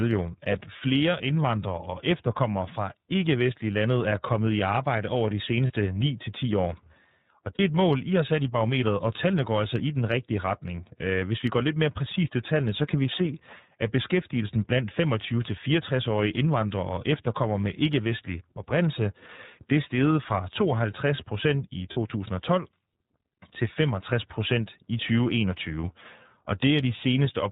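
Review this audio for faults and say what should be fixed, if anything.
The whole recording has passed through the iLBC codec, a narrowband VoIP coder. Nothing above 4 kHz survives, so the speech sounds boxed-in, with a plainly audible rough, slightly synthetic edge where each 30 ms block's excitation is rebuilt independently. That frame length fits iLBC's 13.33 kbps mode. On a spectrogram, energy stops at a hard ceiling near 4 kHz across the full clip, and harmonics look smeared rather than crisp. Prevent this by carrying the call on a wideband codec such as Opus or G.722 instead.

There are three short dropouts from lost iLBC frames: at 5.67 s right after "i arbejde over de", at 7.56 s just before "er et mål I", and at 21.93 s right after "procent i". Each runs about 40 ms, which fits a single lost 30 ms frame. The decoder fills the hole by repeating the last pitch cycle mixed with noise, so you hear a brief held, faintly buzzy vowel, and clean speech resumes immediately afterwards. 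On the waveform each spot shows a short stretch of near-identical repeated periods. On the spectrogram it appears as a flat, smeared slice with frozen harmonics. Prevent this with a larger jitter buffer, forward error correction or redundant packets on the network path.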